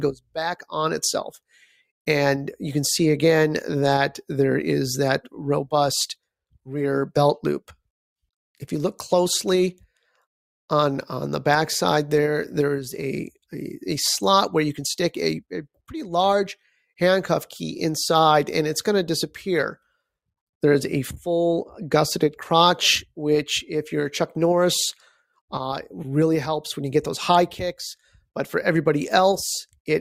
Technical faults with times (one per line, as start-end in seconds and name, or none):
1.37-1.74 sound cut by the noise suppressor